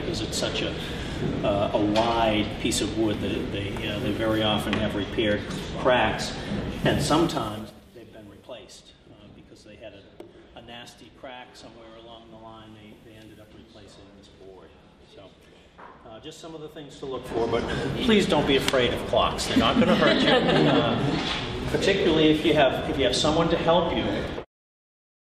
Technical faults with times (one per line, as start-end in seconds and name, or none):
7.22-7.92 zipper noise
16.86-17.60 zipper noise